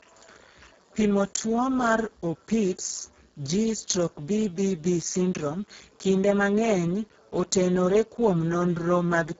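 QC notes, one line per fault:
Throughout, Speex codec: heavy low-rate CELP damage that fits a setting near 6 kbps. Too few bits for the excitation leave the speech noisy and hoarse. The spectrogram shows blurred harmonics, a shaped noise-like fill above 4 kHz, and nothing above 7.7 kHz.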